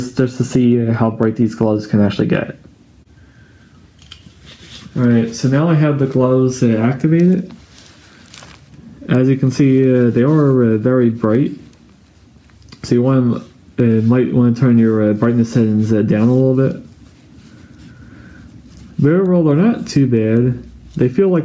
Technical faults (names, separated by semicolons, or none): gain pumping